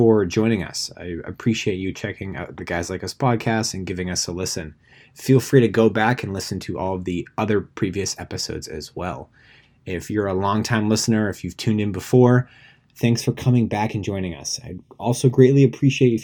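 From 13.00 s to the end at 16.24 s, just after "you've tuned in before", channel delay (comb filtering) sets in. One channel lags by roughly a third of a millisecond before the mono sum, cutting regularly spaced notches from around 1.5 kHz upward and leaving the speech hollow and phasey.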